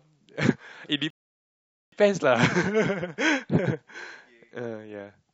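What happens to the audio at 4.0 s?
Nothing goes wrong at 4.0 s; the audio is intact at that moment.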